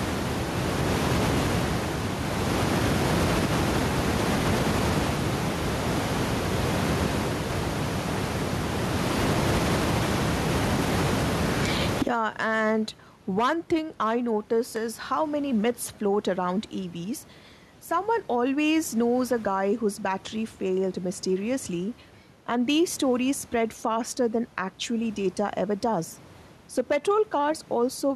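Gain pumping runs through the whole speech recording: loud and soft parts end up closer in level and the sound is squashed, a gain swing of roughly 30 dB. The likely cause is a microphone gain set far too high with a fast limiter clamping it on each loud sound. On a waveform, loud and soft passages sit closer in level than natural speech would. On a spectrogram, the room noise sits about 28 dB below speech.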